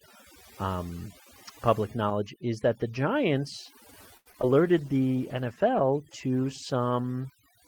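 From start to finish there's overdone noise removal on this speech. The suppressor was set so aggressively that any frequency band sitting close to its noise estimate gets pulled way down or switched off. The background collapses into near silence dotted with twinkly little specks, and the quieter parts of the voice get eaten along with the noise.

At 4.17 s there's a short stall from a late packet, running to about 4.28 s. A packet showed up late, the jitter buffer ran dry, and the receiver held the last bit of sound for about 83 ms until it arrived. Then it picked up right where it left off, so nothing is actually lost. You just hear a sound hang on a touch too long, with a faint buzzy quality to it.

Right behind that come two bits of short concealed packet loss. The first runs from 4.32 to 4.36 s and the second from 4.42 to 4.55 s. Each time about 20 ms of audio never made it to the decoder, and the receiver patched the gap by extending the preceding sound before blending back into the real signal. 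The second patch also stretches things out by a little extra time. Both come across as a quick smear or wobble, and a short sound could easily slip out in either gap.

From 4.6 s to 7.24 s there's a call bitrate drop. The bandwidth estimate fell and the encoder was told to spend far fewer bits. The coarser coding fits a fall from about 32 kbps to about 18 kbps, held at the low rate for roughly 2.6 s. Over that stretch the voice turns rougher and more muffled, with some of the top end gone, until the rate climbs back just before the end.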